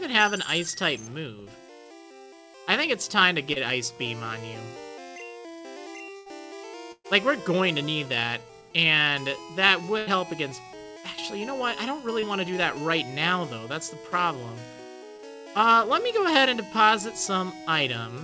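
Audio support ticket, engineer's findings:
Short concealed packet loss at 3.53–3.59 s, 12.20–12.25 s and 15.16–15.22 s. Brief smear or wobble, about 30 ms of real audio missing each time. Receiver-side concealment in the jitter buffer and decoder extrapolated the last sound, then cross-faded back into the real signal. A short transient falling inside one of these gaps can disappear. The band stops at 8 kHz, consistent with G.722 at 64 kbps.

Burst of packet loss at 6.17–6.29 s, 6.92–7.07 s and 9.98–10.10 s. About 90 ms, 120 ms and 90 ms of audio are missing respectively. In each gap the last sound is held as a buzz or fading hiss while concealment attenuates it. At 6.92 s the extension fades to roughly 60 ms of silence before playback resumes. Several consecutive packets were lost or arrived late. Audio picks up further on with the intervening section gone.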